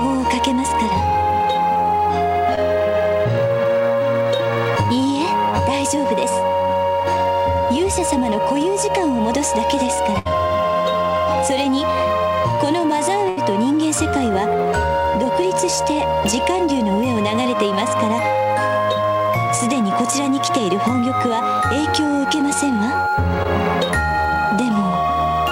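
At 2.55 to 2.59 s there is a short concealed packet loss: about 20 ms of audio never arrived in time, and the receiver covered it by extending the preceding sound for roughly 13 ms before blending back into the real signal. It comes through as a tiny smear or wobble rather than a dropout.

At 10.19 to 10.27 s a burst of packet loss takes out about 60 ms. The receiver extends the last sound for around 65 ms while fading it, producing a held, decaying buzz or hiss. The same happens at 13.29 to 13.39 s, where about 80 ms is lost and roughly 76 ms of fading fill is heard. What separates these from the short losses is length. The fill is long enough to hear as a sustained, dying tone, and the audio then resumes further on, with a piece skipped.

At 23.43 to 23.47 s a second short concealed packet loss drops about 20 ms, patched with roughly 18 ms of extended sound. Like the first, it registers as a brief wobble.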